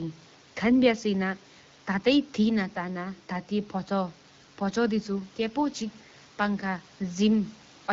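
No technical faults are present in the speech, with only room noise sitting about 29 dB below the talker and the light coding character of wideband HD Voice, which fits the AMR-WB codec running at 12.65 kbit/s.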